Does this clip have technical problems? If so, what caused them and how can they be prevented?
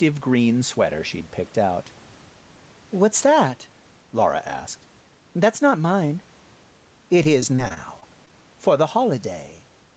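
Yes. The clip has two faults.

Gain pumping runs through the whole clip. The background swells up in the pauses and then drops by around 10 dB as each loud stretch of speech begins, so loud and quiet parts sit unnaturally close in level. The likely cause is input gain set far too high, with a fast limiter clamping down on every peak. The swells follow the speech level itself, which is what separates this from room noise that simply comes and goes. Prevention: lower the microphone gain so the limiter rarely engages.

Repeated packet loss (robotic sound) affects the span from 7.23 to 8.33 s, ending just before "for the". The sound turns choppy there, with what sounds like about eight short holes. Each hole is bridged by stretching the previous sound, and the longest is about 24 ms. Roughly 11% of that stretch is patched-in audio rather than real signal. What sets it apart from the pumping is that the texture breaks up. 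Prevention: use a steadier network link with less congestion.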